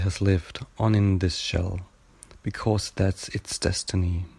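A short speech recording with no audible technical fault anywhere in the signal.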